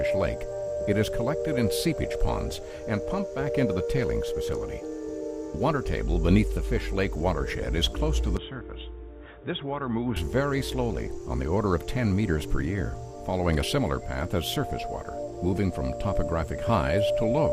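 From 8.37 to 10.17 s the sound abruptly turns dull and boxy, with nothing above 3.8 kHz, drops roughly 5 dB in level and gains a faint new background noise, with no gap at either edge. The likely cause is the input switched to a poorer device for that stretch.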